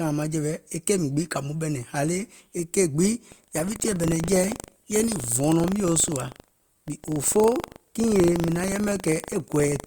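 From 3.28 s to the end, buffer tearing splices slivers of older audio into each buffer, causing a 25 Hz rattle seen as evenly spaced vertical lines.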